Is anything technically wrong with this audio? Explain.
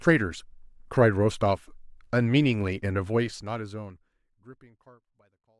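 No, there's nothing technically wrong here; the speech just eases out in a smooth, deliberate fade that begins around 3 s and carries gently to the end with no click or hard edge.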